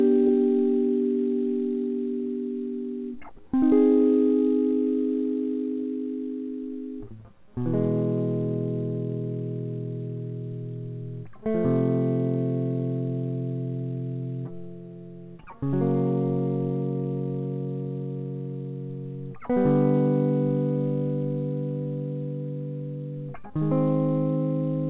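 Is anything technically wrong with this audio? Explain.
No, nothing's wrong here: it's music heard over a call line using G.711 A-law at 64 kbps, so the top end stops at 4 kHz, which is just how that codec works.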